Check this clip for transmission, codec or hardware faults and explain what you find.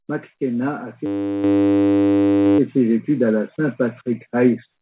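The microphone volume steps up twice in this speech, with the whole level jumping at once. At 1.44 s it rises by about 7 dB, and at 2.46 s it climbs another 2 dB or so. The call software decided the mic was too quiet and raised the device's input volume in a single step each time. That's why the voice and the background noise jump together instead of the level easing up gradually. The first jump is the larger one. The audio has nothing above 4 kHz, which points to a narrowband G.711-style call codec.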